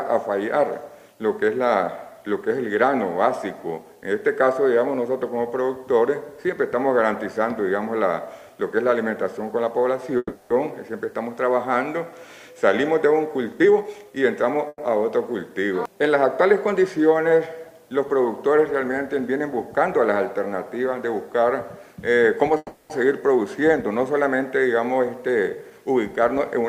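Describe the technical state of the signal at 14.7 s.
A call audio freeze runs from 14.68 to 14.80 s, likely from late packets draining the jitter buffer: the last sound is stretched into a fading buzz, ending in 30 ms of silence, then resumes intact, about 110 ms later.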